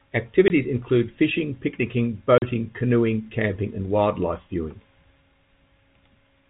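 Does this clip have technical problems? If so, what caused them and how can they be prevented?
Yes. Packet loss filled with silence cuts the speech twice. A 20 ms hole at 0.48 to 0.50 s sits just before "include fishing picnicking". A 40 ms hole at 2.38 to 2.42 s falls between "include fishing picnicking" and "canoeing camping and wildlife". The gaps fit one and two lost 20 ms packets. The receiver played silence for them, so the speech drops out with hard edges. Using packet loss concealment and a jitter buffer with forward error correction would prevent this.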